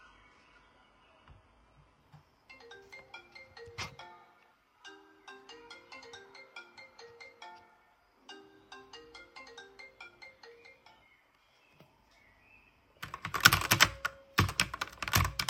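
From 0.0 to 2.0 s the adaptive stream starts at a low bitrate: the player opened on a cheap version while measuring the connection. Treble sounds dull or synthetic, fitting roughly 12 kbit/s HE-AAC, until a gapless jump to fuller sound. A spectrogram shows a low ceiling widening abruptly at 2.0 s.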